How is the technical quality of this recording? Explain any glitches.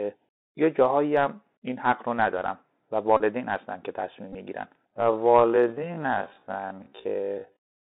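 Quality's pretty rough: it's a narrowband headset call with two dropout buzzes and a slowed-down ending.

The Bluetooth CVSD headset codec colours the whole thing. Everything sits in roughly a 250 Hz to 3.7 kHz band, fitting a 64 kbps link. The one-bit-per-sample coding can't keep up with sharp, loud bits, so you get scratchy sibilants and a grainy hiss under the speech.

There are two Bluetooth headset packet repeats, at 3.17 to 3.23 s and 4.33 to 4.35 s. The link dropped about 30 ms and then about 19 ms of audio, and the chip kept replaying the last good packet. That repetition every 3.75 ms gives a short, steady buzz near 267 Hz.

From 4.9 s to the end, the pace suddenly drops to half speed while the pitch holds, so it drags. That's likely a time-stretched section, where software repeats short slices to lengthen the audio without shifting pitch.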